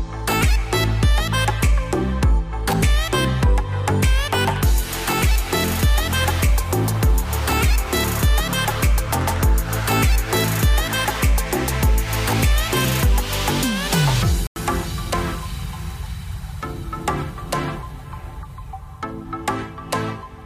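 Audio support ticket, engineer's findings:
Corrupt FLAC frame at 1.60 s and 15.52 s. Each lasts a few milliseconds, with the error peaking at about -29 dBFS. Probable component: FLAC decoder skipping the checksum, so prediction runs on flipped bits, at worst until the frame ends. Waveform shows a brief discontinuity; spectrogram shows a thin vertical stripe.

Corrupt frame muted from 14.47 s to 14.56 s, a 95 ms hole that starts abruptly, consistent with several consecutive frames refused. Probable component: decoder rejecting damaged compressed frames, with the player inserting silence and preserving timing. Waveform shows a flat gap; spectrogram shows a blank vertical band.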